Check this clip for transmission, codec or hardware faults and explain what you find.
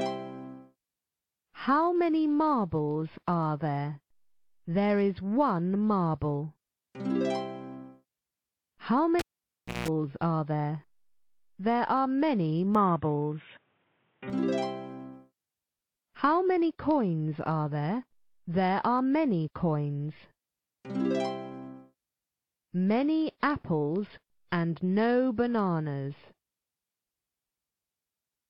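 Two faults show up, a pulled-and-replugged cable and a brief switch to a poorer input.

From 9.19 to 9.88 s the cable is pulled and plugged in. Breaking a live connection sends a pop down the line, and the signal then drops to near silence for about 0.64 s. As the plug goes back, the tip makes contact before the ground does, so the open input picks up 60 Hz mains buzz for about 0.18 s. A second pop marks the return of the sound.

From 12.75 to 14.30 s the input was likely switched to a poorer device. That path carries nothing above 3.8 kHz, so the sound abruptly turns dull and boxy with no gap at the switch, and the level stays about the same. A faint new noise floor sits far below the signal. At 14.30 s the full band returns and the sound clears again.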